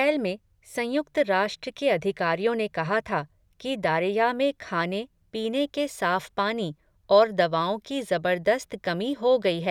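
No technical faults can be heard at any point in the speech signal.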